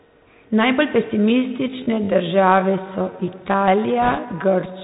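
Speech heard through a Bluetooth CVSD headset codec for the whole clip: on a spectrogram everything stops dead near 4 kHz with an empty band above, which fits the narrowband 64 kbps CVSD link. The encoder sends one up-or-down bit per sample with an adapting step, so loud high-frequency sounds outrun the step and distort, sibilants come out scratchy, and a grainy hiss sits under the speech. From 1.14 s to the end the pace suddenly drops to roughly 0.7 times normal while the pitch stays put, a time-stretched section that was likely produced by software lengthening the audio by repeating short slices. The slowed speech drags. On a spectrogram, harmonics and formant movements stretch out horizontally, and the waveform's syllable envelopes become longer and blurrier. From 4.02 s to 4.19 s bit errors on a Bluetooth voice link add a rushing, crackly noise, consistent with an error rate of a few percent across a few dozen frames. 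Because every CVSD bit carries the same small weight and its effect fades quickly, there are no sharp clicks. Instead the spectrogram shows a short smear of broadband grain below 4 kHz, and the waveform thickens with dense fuzz that grows with the speech level rather than spikes.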